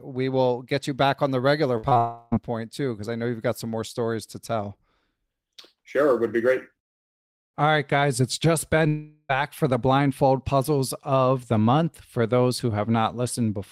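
Just after "back on the regular", a burst of packet loss at 1.77–1.85 s drops about 60 ms. The receiver extends the last sound into a brief, fading continuation before playback jumps ahead. Short concealed packet loss follows at 1.89–1.93 s and again at 1.93–1.97 s, each losing about 20 ms. These are patched by continuing the previous sound and are heard as quick smears or wobbles. A long network dropout then runs from 1.97 to 2.34 s. Around 340 ms of audio is gone, likely from arrival stalling on the network, and is bridged by a decaying continuation of the last sound with no true silence before "point too because I" resumes. A second long network dropout at 8.88–9.31 s removes about 420 ms, likely for the same reason, and is filled by a fading continuation of the preceding sound.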